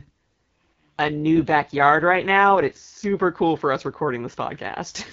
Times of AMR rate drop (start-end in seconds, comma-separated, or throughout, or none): 0.79-3.18